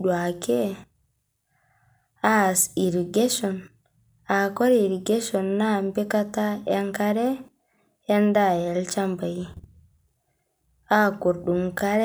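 No technical fault can be heard anywhere in the speech recording: the signal stays continuous and stable throughout, with nothing that points to a problem in capture, transmission or playback.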